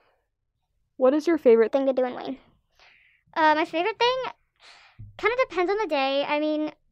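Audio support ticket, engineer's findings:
Section at the wrong speed, 1.68 s to end of clip. Speech abruptly higher and hurried, running 1.28x fast, pitch up around four semitones, tempo and pitch shifting together at one moment. Likely cause: playback or editing stage clocking this segment at the wrong rate, e.g. a sample-rate mismatch where the section was joined or resampled.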